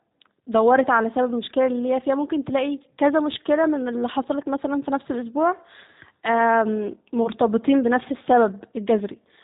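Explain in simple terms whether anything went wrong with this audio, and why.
Something did go wrong, and it lasts the whole recording. The speech has been squeezed through the G.729 codec, a telephone-style compressor used for internet calls. It rebuilds the voice from a rough model of the throat and mouth plus a few pulses every few thousandths of a second. So it sounds a little rough and artificial. Nothing above about 3.8 kHz survives, which makes the sound thin and muffled, like a phone line.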